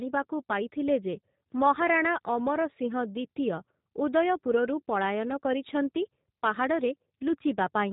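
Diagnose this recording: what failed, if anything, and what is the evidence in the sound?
G.729 codec damage throughout the clip, at the codec stage. Nothing above 3.8 kHz survives, and the speech is plainly rough and synthetic. That fits an 8 kbit/s G.729A encoder rebuilding each 10 ms frame from a vocal tract filter, a pitch predictor and a few pulses.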